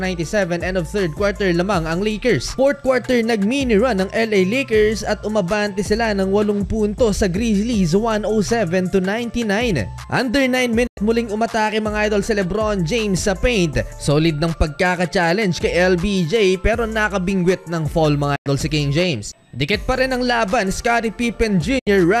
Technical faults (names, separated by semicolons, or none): digital broadcast dropout